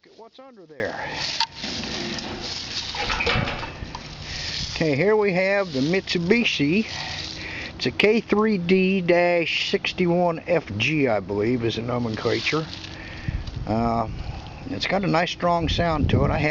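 From 0.0 to 0.8 s, one channel inverted is the likely cause: with one side's polarity reversed, everything common to both channels cancels when summed to mono. The level drops by about 26 dB, leaving only a faint residue of the difference between channels.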